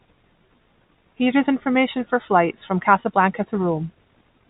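No technical faults are audible.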